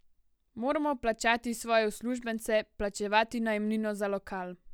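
No technical faults can be heard in this recording.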